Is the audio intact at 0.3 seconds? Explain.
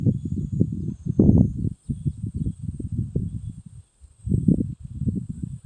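Yes, the audio is intact at 0.3 s, with no fault at that moment.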